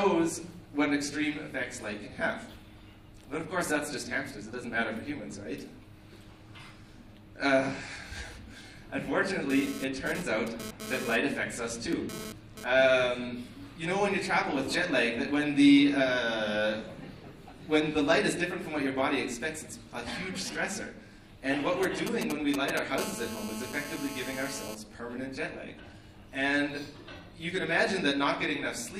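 A 2G phone near the recording chain is pulsing its transmitter 217 times a second, and the audio circuitry rectifies that radio energy into GSM phone buzz: a hard, raspy 217 Hz tone full of harmonics, unrelated to the sound. From 9.50 to 12.64 s it comes and goes in data-transfer fashion at about -10 dB relative to the signal, and from 22.98 to 24.75 s it holds steady, call-style, at about -11 dB. Just before that, from 21.83 to 22.79 s, GSM signalling bursts are rectified the same way, producing a galloping dit-dit-dit of short 217 Hz buzzes only a few dB below the audio.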